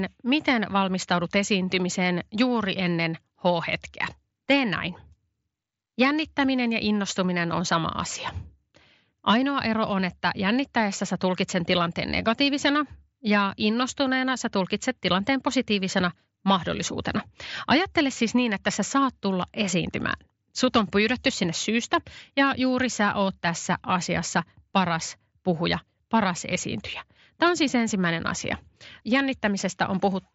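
This speech clip has nothing technically wrong with it.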